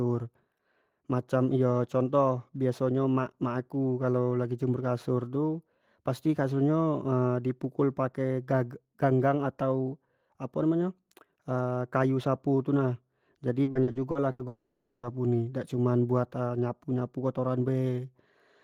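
From 13.63 to 14.42 s the speech turns choppy: repeated packet loss (robotic sound). Six gaps, the longest 80 ms, were patched by repeating the previous sound, about 35% of the span. On a spectrogram, short smeared, stretched harmonic blocks interrupt the normal detail.

At 14.47 s the sound freezes into a buzzy, fading continuation lasting until 15.06 s, with only about 10 ms of true silence. This is likely a long network dropout. The waveform shows a decaying repeated tail, and the spectrogram shows flat horizontal bands before speech resumes.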